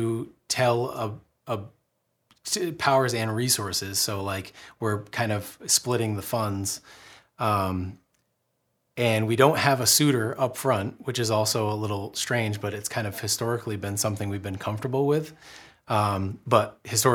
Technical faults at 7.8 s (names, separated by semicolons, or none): none